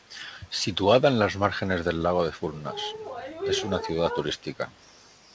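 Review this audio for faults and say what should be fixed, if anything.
An echo leak, most likely from a far end on loudspeaker whose echo canceller let part of its microphone pickup through, sends a delayed copy of the speech back into the call. Between 4.38 and 4.42 s a very faint trace of the speech returns about 160 ms behind the original, a brief, low-level ghost rather than a sustained repeat. The call path itself has nothing above 8 kHz, which fits a G.722 codec at 64 kbps. To prevent this, tune or replace the far end's echo canceller, or have that side use a headset.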